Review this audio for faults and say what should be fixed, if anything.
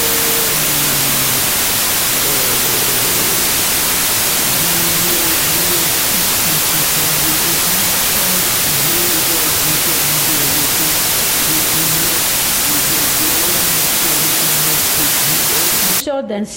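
From 0.0 to 16.0 s there's a wrong sample width fault: packed 24-bit samples read as 16-bit, so bytes misalign into loud noise, and the buried sound runs at two-thirds speed, pitched down. Make sure the reader takes the sample width from the file header rather than assuming 16-bit.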